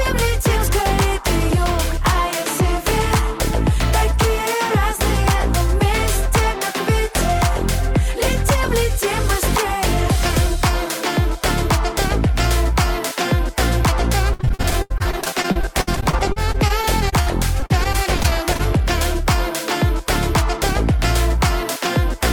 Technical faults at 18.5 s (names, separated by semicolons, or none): repeated packet loss (robotic sound)